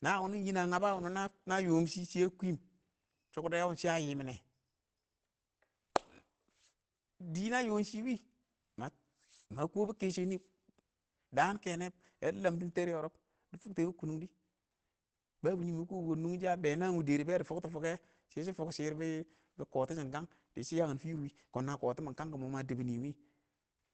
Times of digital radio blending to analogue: none

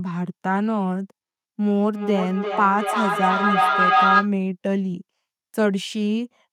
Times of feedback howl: 1.92-4.34

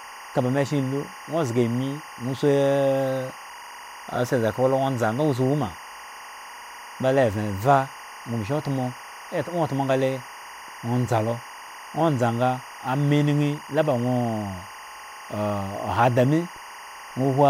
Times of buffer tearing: none

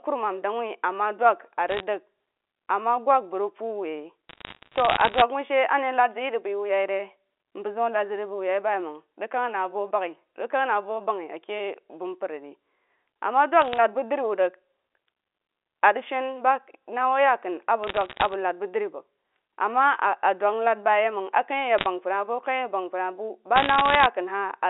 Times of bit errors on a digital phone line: 1.68-1.83, 4.29-5.22, 13.62-13.77, 17.84-18.34, 21.78-21.86, 23.56-24.06

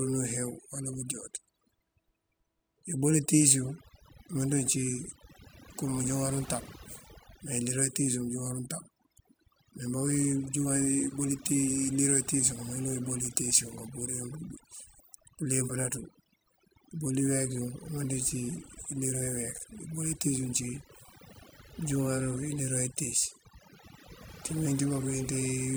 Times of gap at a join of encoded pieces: none

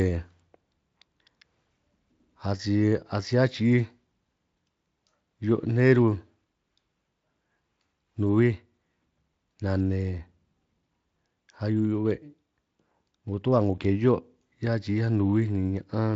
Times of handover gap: none

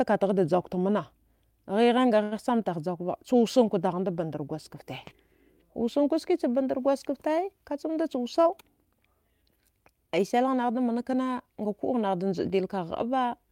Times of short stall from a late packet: 2.23-2.33

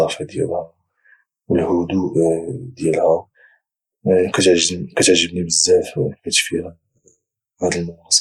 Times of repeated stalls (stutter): none

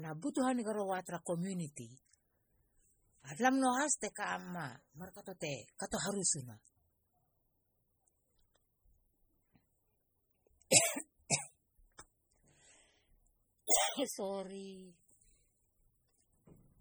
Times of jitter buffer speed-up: none

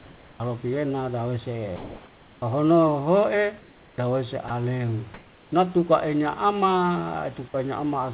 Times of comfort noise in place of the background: 0.00-0.40, 1.76-2.42, 3.60-3.98

